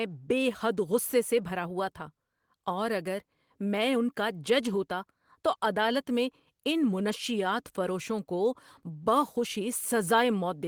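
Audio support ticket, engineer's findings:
No faults found in the audio; nothing to report for this ticket.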